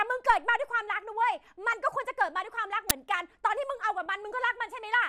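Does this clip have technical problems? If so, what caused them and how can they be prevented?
Yes. At 1.72 s and 4.06 s a brief burst of noise blips sits over the speech. This is DAB burbling. Weak reception let bit errors of around 0.15 and 0.1 percent slip past error correction into the MP2 data. Corrupted samples put short noise blips in single sub-bands. A better antenna or a stronger signal prevents it.

At 2.90 s a loud burst of digital noise, about 11.6 ms long, cuts in. This is an uninitialised buffer: a block was played before audio was written to it, so leftover memory became samples. Its length fits a 512-sample buffer. Zeroing buffers before playback prevents it.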